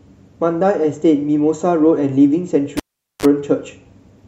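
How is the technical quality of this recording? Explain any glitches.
The speech is interrupted once by a cable pulled and plugged in. At 2.77 s a pop cuts the sound, and near silence follows for about 435 ms. A live connector was withdrawn, breaking the signal path abruptly. As it was pushed back, only the plug tip touched at first. That picked up 50 Hz mains hum, heard as a 32 ms buzz. A second pop marks full contact, and the speech resumes by 3.26 s.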